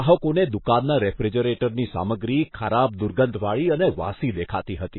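From the start to the end of the speech there is nothing above 4 kHz, and the remaining band carries heavy coding damage. The hard treble ceiling and the unstable, thinned texture point to MP3 compression as the likely cause, at a bitrate so low it fits something around 19 kbps. Starved of bits, the encoder discards everything above a fixed cut-off and keeps only the spectral lines its hearing model ranks highest. The weaker content is lost, leaving the speech dull and degraded throughout.

At 2.51 s a pre-echo appears, running to 2.54 s with a spread of about 29 ms ahead of a sharp onset. The codec distributes its quantisation noise across a whole transform block, so when a loud attack lands late in a block, noise sized for that attack also fills the quiet stretch before it. The result is a brief smear of hiss that arrives ahead of the onset and blunts it.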